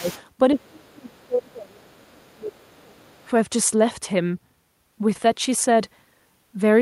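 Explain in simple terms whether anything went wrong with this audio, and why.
Two problems show up here, both typical of a call where both people talk at once.

Speech suppressed in double talk: the main voice dips very briefly at the start, up to 0.07 s, then sinks much deeper and in pieces between 0.54 and 3.04 s. The call's echo canceller likely mistook the overlap for echo and turned the talker down. What sets it apart is that the talker's own voice gets quieter or duller.

Other side's voice leaking through: a faint second voice sits underneath from 0.0 to 0.22 s, in a tiny scrap around 2.3 s, and again from 3.01 to 3.26 s. The far caller's sound, played from the loudspeaker, was likely not fully removed from the microphone. Unlike the dips, this adds a different voice rather than weakening the main one.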